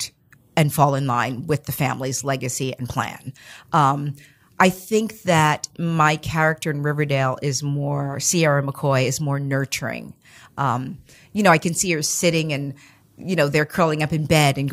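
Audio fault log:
No faults were found in this speech recording.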